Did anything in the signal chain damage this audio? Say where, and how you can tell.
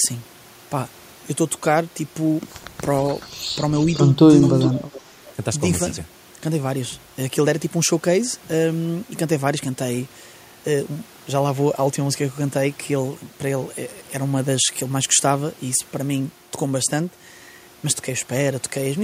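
Yes. A delayed copy of the speech trails behind it about 0.43 s later, first as brief scraps at 3.2–3.28 s and 3.8–3.98 s, then more strongly from 4.42 to 5.01 s. This echo leak likely comes from call processing: a loudspeaker on the far end fed the microphone, and that side's echo canceller let part of the returned signal through.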